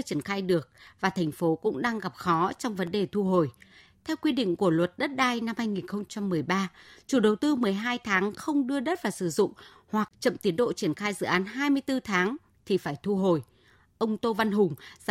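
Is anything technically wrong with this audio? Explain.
Yes. From 0.87 s to 4.87 s the speech has periodic USB or driver dropouts. Something in the system stalls the USB link or audio driver once every 1.0 s, and each stall loses a sliver of audio, roughly half a millisecond, which is replaced by silence. About five gaps fall across that stretch. Each one cuts the waveform abruptly, so where it lands on speech it comes through as an evenly spaced tick.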